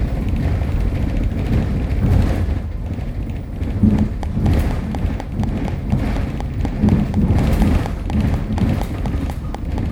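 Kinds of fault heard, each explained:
Train of clicks: a recurring pulse entered the signal path, likely interference from nearby equipment or a faulty connection or power supply. From 3.99 s to 9.79 s, around thirty near-identical clicks tick at a steady 4.1 per second, standing well above the sound and audible in gaps too.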